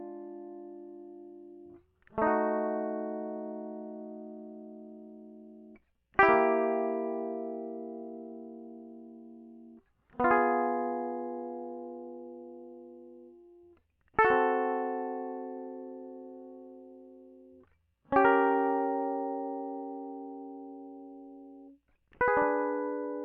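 No technical faults can be heard anywhere in this music.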